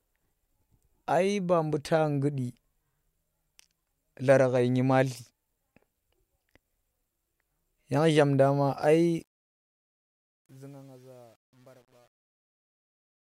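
Truncation distortion on a fade runs from 9.13 s to the end at 13.4 s of this speech recording. The fade-out is requantised without dither, so as the level sinks the waveform collapses into coarse steps, which fits a stage keeping about 9 bits. From 10.0 s onward the tail turns gritty.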